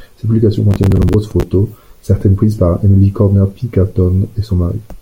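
A speech recording with processor overload crackle from 0.71 to 1.43 s: around fifteen roughly 10 ms buffers miss their deadline, each replaced by stale repeated audio with hard edges, giving gritty tearing. The spectrogram shows dense vertical broadband streaks, and the waveform shows abrupt discontinuities.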